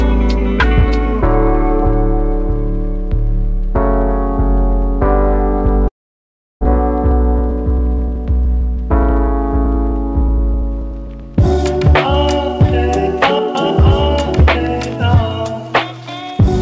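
The audio passes through a call codec, with nothing above 8 kHz, consistent with G.722. From 5.88 to 6.67 s there is a long network dropout. The last sound is drawn out into a fading buzz or hiss, silence follows, and about 0.6 s is likely lost. Then comes a jitter buffer speed-up from 7.11 to 11.65 s. The audio runs 3% fast at unchanged pitch, as short pieces are trimmed to shed about a tenth of a second of delay.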